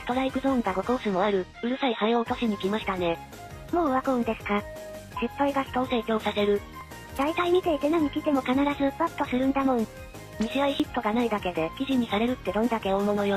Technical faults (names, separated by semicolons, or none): overlap between stream segments